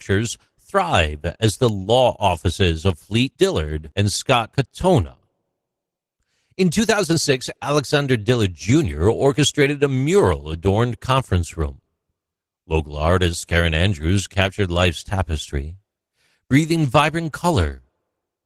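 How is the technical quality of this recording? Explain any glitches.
The whole clip carries plainly audible Opus voice compression. It sounds like a low bitrate in hybrid mode, maybe around 16 kbps: the speech core gets coarse linear-prediction coding, and a thin upper layer fills in the top end. That leaves the speech hoarse and slightly robotic throughout.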